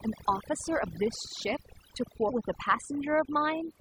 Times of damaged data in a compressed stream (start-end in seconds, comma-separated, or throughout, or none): 2.28-2.30